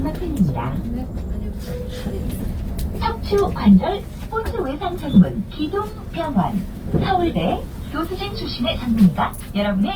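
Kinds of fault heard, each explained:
Opus compression: grainy, rough texture runs through the whole clip, with tones turning noisy, likely from Opus in its CELT music mode at around 24 kbps. Bit-starved bands get filled with folded or noise-like content, though the full top end stays present.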